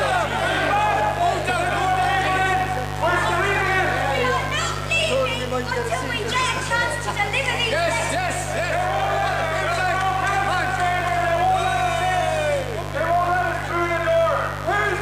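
Mains buzz runs through the whole clip, from start to finish. Sharp switching spikes from the 50 Hz supply leak in twice per cycle, spraying harmonics up into the kilohertz range, so a steady, raspy buzz sits only about 10 dB below the sound itself.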